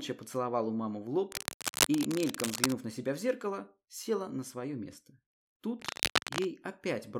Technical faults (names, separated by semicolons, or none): cable scratch noise